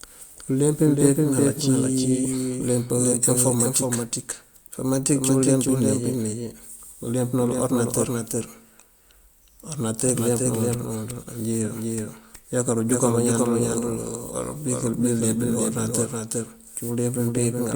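From start to finish, every syllable of the speech returns a beat late as a second, full-band copy about 0.4 s behind and around 5 dB quieter, with no decay or room colour. This doubled audio track likely comes from the signal being captured twice through a slower path.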